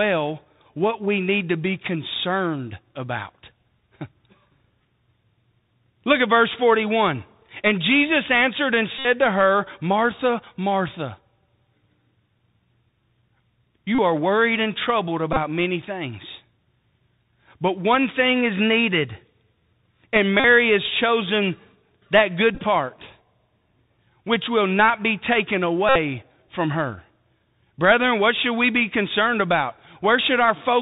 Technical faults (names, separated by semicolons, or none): Bluetooth CVSD headset codec; Bluetooth headset packet repeated